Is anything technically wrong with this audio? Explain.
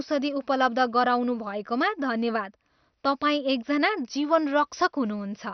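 Yes. Throughout the speech there is heavy MP2 compression damage, with nothing above about 6.1 kHz. It is likely from a low bitrate that forced Layer II to drop its upper sub-bands and coarsely quantise the rest. The result is dull, gurgling and granular. A spectrogram shows a hard ceiling near 6.1 kHz with flickering, blocky bands beneath.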